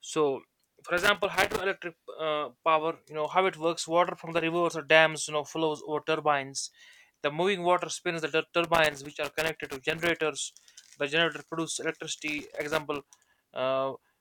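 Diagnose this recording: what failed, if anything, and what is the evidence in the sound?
Loose connector crackle in the analogue wiring: irregular scratchy bursts at 0.98–1.61 s, 4.34 s, 8.64–10.21 s and 12.28–13.38 s, where an intermittent contact chops the signal.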